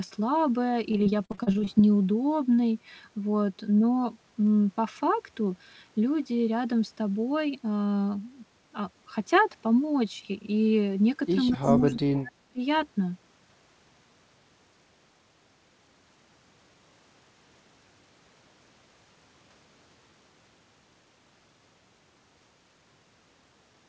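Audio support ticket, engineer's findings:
Repeated packet loss (robotic sound), 0.92–1.69 s: packets repeatedly lost or late; 11 gaps, longest 40 ms, about 260 ms missing, roughly a third of the span concealed by extending previous audio. Result: choppy, robotic speech with fragments dropped.

Echo leak, 11.48–11.53 s and 11.78–11.82 s: far-end echo canceller likely leaving residual loudspeaker pickup, returned to sender. Heard as short delayed copies of speech, 215 ms behind, about 15 dB and about 20 dB below the talker.

Speech suppressed in double talk, 11.50–12.60 s: overlapping talk; echo canceller likely unable to separate near talker from echo, attenuating both. Speech dips for about a second, deepest drop around 35 dB. Band limit at 8 kHz, consistent with a G.722 wideband path.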